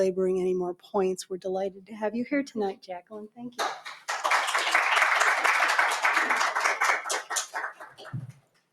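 A noise suppressor built for speech is applied to these sounds throughout. It treats held and decaying sound as noise and keeps turning it down. The level swings by around 15 dB. The result pumps and thins while sharp attacks pass.

Sound is cut by the noise suppressor at 0.74 to 0.95 s, 1.24 to 1.46 s, 1.7 to 1.98 s, 2.73 to 3.59 s, and 7.2 s to the end. Drops reach about 12 to 20 dB. The deepest are about 20 dB, in the long stretch near 3 s and at the end. Sustained sound sinks and decays are chopped short.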